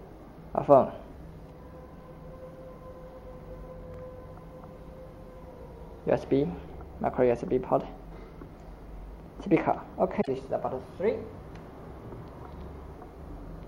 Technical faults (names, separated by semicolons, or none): overlapping chunks; damaged data in a compressed stream